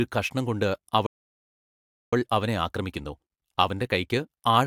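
A speech recording that cuts to silence at 1.06 s and stays silent until 2.13 s, a gap of about 1.06 s. This is a playback stall, likely caused by the player's buffer running dry or its output thread being blocked, so nothing reached the output until data flowed again. From 2.13 s to the end, the speech runs fast, at 1.1 times normal speed, while its pitch stays unchanged. That is time-compressed catch-up: the player trims the backlog built up during the stall by dropping short slices of audio and cross-fading across the joins.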